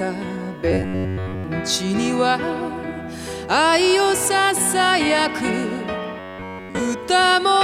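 From 0.72 to 1.44 s and again from 6.19 to 6.79 s there is robotic sound from repeated short buffers, most likely because new audio stopped arriving in time and playback kept looping its last short chunk. In both stretches essentially none of the original material gets through. The loop repeats at about 93.8 Hz, which fits a chunk roughly 10.7 ms long, so the sound collapses into a rigid, metallic buzz fixed at that pitch.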